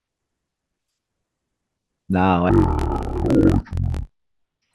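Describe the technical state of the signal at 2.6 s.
At 2.6 s the speech sounds an octave low, doubled and choppy, fluttering near 47 Hz. This is interleaved audio read as planar, from 2.49 s to the end: each 21.33 ms block, consistent with 1024 samples, is split into two half-speed halves played together.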